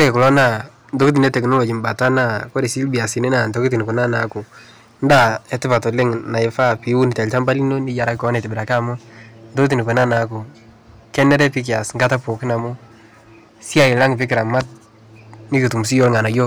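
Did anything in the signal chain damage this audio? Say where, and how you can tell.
Yes. Every louder syllable in the speech carries a harsh, gritty fuzz from start to finish: hard clipping. The signal was driven about 13 dB past what a gain stage or converter could pass. A small share of samples, roughly one or two percent, had their peaks sliced flat, spraying high harmonics.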